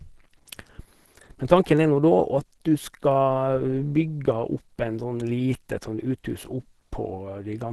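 Opus compression runs throughout the whole recording, with nothing in the speech above about 12.1 kHz and plainly audible coding damage. The voice sounds hoarse and somewhat muffled, with a grainy roughness in place of clean detail. The likely cause is a low-rate Opus encode that dropped into its hybrid speech mode, which fits a bitrate near 16 kbps. Bits ran short, so the encoder narrowed the band and approximated the finer structure.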